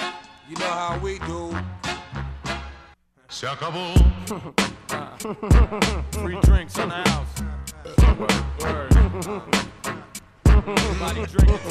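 No audible technical faults detected.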